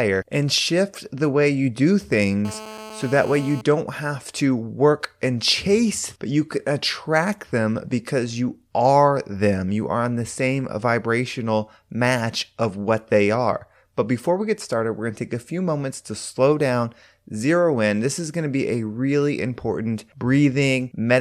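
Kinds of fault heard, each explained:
GSM phone buzz: a nearby 2G phone on a call transmits in pulses about 217 times a second, and the audio circuitry rectifies them, laying a hard, raspy 217 Hz buzz with dense harmonics, about 16 dB below the speech, between "the way you do" and "have to work and".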